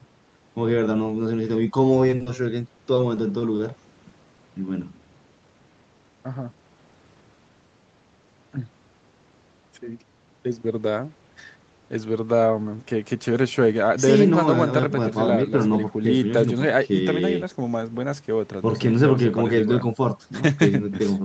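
From 2.07 to 2.28 s, the speech breaks up with repeated packet loss, heard as a robotic sound. Four gaps fall close together, the longest 40 ms. The receiver covers each one by extending the last sound, so about half of this short span is patched audio. It sounds choppy, with small pieces missing. A second run follows from 2.77 to 3.61 s. Five holes of up to 20 ms are spread more thinly, so the stutter is lighter.

At 4.09 to 4.13 s comes a short concealed packet loss. About 20 ms of audio never arrived in time. The decoder filled the hole by continuing what came before, then blended back into the real signal. It is heard as a brief smear or wobble, and a quick consonant there may drop out.

At 5.04 to 5.08 s, there is a short stall from a late packet. The packet was late, and the jitter buffer ran dry. The receiver held the last sound for about 20 ms until the data came, then resumed where it left off. 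Nothing is lost. A sound just lingers slightly too long, with a slight buzz or dip. The call path's Opus coding leaves nothing above 8 kHz throughout the clip.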